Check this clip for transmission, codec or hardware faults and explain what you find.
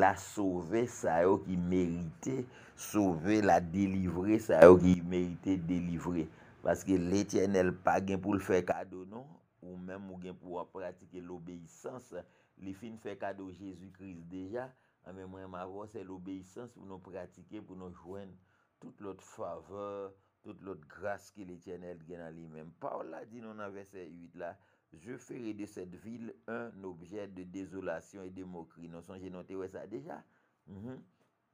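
Two sudden gain jumps are audible. At 4.62 s the level leaps up by about 12 dB and drops back at 4.94 s; from 8.72 s to the end it falls by about 14 dB. Sound and background noise shift together, likely because a gain setting was applied instantly without a ramp. On a waveform the envelope steps abruptly at each edge, and a spectrogram shows full-band brightness changing along a vertical line.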